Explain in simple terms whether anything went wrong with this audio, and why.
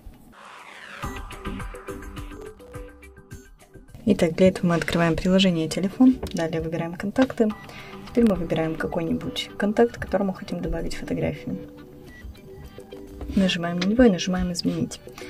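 Three short bursts of processor overload crackle can be heard, from 2.37 to 2.73 s, 7.998 to 8.30 s, and 12.82 to 13.14 s. Each lasts about a third of a second. The computer got too busy to prepare each tiny slice of sound in time. The slices seem to be very short, around a millisecond and a half. Each missed slice became a brief silent gap. Many gaps in a row sound like gritty crackling, which stops when the load eases.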